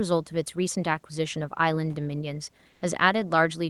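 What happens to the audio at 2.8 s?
From 2.69 to 2.81 s, about 120 ms, the room background gives way to comfort noise. It is a smooth, featureless hiss, about 1 dB quieter than before. The likely cause is Opus discontinuous transmission in a pause, with the receiver synthesizing noise.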